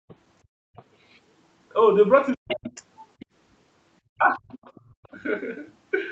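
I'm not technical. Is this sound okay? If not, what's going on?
No. This is a call recording, and its echo canceller, the part meant to stop the other person's voice from bouncing back, misbehaved in three ways.

Background gated by the echo canceller: while the loudspeaker played, the canceller clamped the microphone hard, so the room sound drops out from 0.00 to 0.76 s and again from 4.81 to 5.03 s.

Other side's voice leaking through: the canceller likely missed part of the loudspeaker sound, so a faint second voice slips in at 0.08 to 0.15 s, 0.76 to 1.19 s, 2.50 to 3.26 s and 4.48 to 5.08 s. It is clearest around 2.5 to 3.3 s.

Speech suppressed in double talk: with both people likely talking at once, the canceller turned everything down, so the main voice nearly vanishes from 2.35 to 2.69 s and from 4.03 to 4.57 s.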